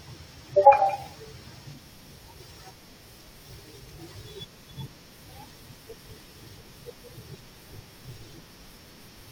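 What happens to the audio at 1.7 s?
At 1.71 s there's an overlap between stream segments: the player trims a sliver of speech it wrongly thinks is doubled, so the waveform jumps, heard as a tiny skip.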